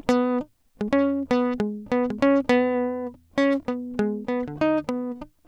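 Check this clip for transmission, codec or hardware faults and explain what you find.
Nothing stood out on listening to this music; there was no fault to report.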